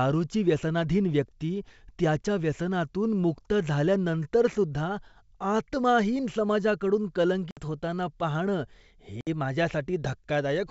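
At 7.51 s, just before "होताना पाहणं", and again at 9.21 s, just after "होताना पाहणं", the speech drops out for about 60 ms, with packet loss on an ADPCM call the cause. Each gap covers several lost packets, filled with silence: a flat, empty slot in the waveform and a blank vertical band across the spectrogram, edges cut sharply. The G.722 decoder's predictor and step size lose track of the sender, so speech resumes with brief distortion before settling.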